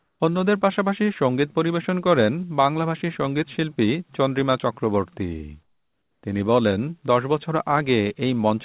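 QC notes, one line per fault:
0.0–0.2 s and 5.63–6.23 s, comfort noise in place of the background: during these pauses the real background, already about 47 to 49 dB below the loudest speech, gives way to a smooth, featureless hiss about 7 dB and about 10 dB quieter, likely from discontinuous transmission with the receiver synthesising noise. On a spectrogram these spans show flat, uniform grey shading below the 4 kHz ceiling of the narrowband call path. On the waveform the noise floor drops to an even, lower band.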